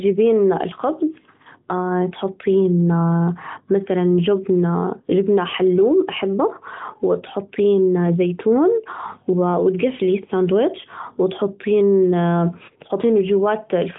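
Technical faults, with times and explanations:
No technical faults detected; the speech comes through a narrowband AMR mobile codec path, so nothing above about 3.8 kHz is present.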